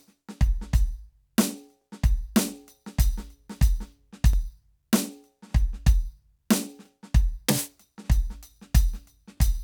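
Overlapping chunks at 1.81–1.83, 4.33–4.35, 6.85–6.87 and 9.37–9.39 s: each 2.5 s chunk restarts 20 ms early, replaying that sliver as a regular click-stutter in the music.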